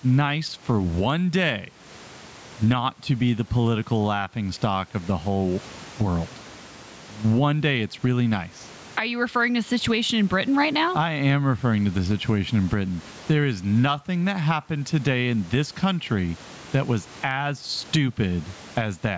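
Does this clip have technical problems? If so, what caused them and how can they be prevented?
Yes. Gain pumping runs through the whole recording. The level keeps swinging, by around 20 dB, as the processing reacts to the loud moments. The likely cause is input gain set far too high for the microphone. A fast limiter or compressor then pulls the level down on each loud sound and lets it rise again after. Loud and soft parts end up closer together, and the sound is squashed. The room noise, about 36 dB below the speech, is part of the recording. To prevent it, lower the microphone input gain so the limiter rarely has to act.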